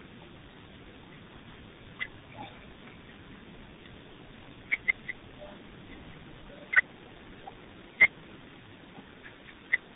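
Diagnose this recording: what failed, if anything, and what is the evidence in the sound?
What failed is tandem speech coding, at the codec stage, and it runs through the whole clip. The speech sounds rough, dull and warbly, and nothing reaches past about 3.8 kHz. That combination suggests two speech coders in a row, probably a low-rate 6.3 kbit/s coder like G.723.1, then CVSD, with a G.711 A-law hop between them. Each coder re-encodes the previous one's damage, so the artefacts pile up.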